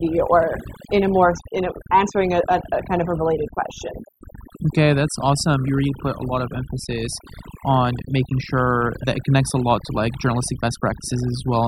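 Speech throughout, with overdone noise removal running for the whole clip. The denoiser was set too aggressively, so any frequency band sitting close to its noise estimate gets pulled down hard or muted, taking the softer parts of the voice along with the noise. Between phrases the background collapses to near silence sprinkled with twinkling specks. On a spectrogram the gaps show as dark fields dotted with isolated bright pixels, and the speech harmonics look patchy, with holes where quieter detail was carved out.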